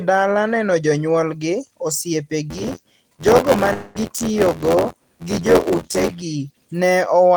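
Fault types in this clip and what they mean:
Buffer tearing: the writer and the hardware have slipped, so about a fifth of each buffer replays audio from roughly 20 ms earlier, giving an 86.1 Hz robotic buzz that fits a 512-sample buffer.
Long network dropout: around 3.73 s the sound smears into a fading 215 ms buzz, then resumes with about 220 ms missing, likely a stretch where no audio arrived.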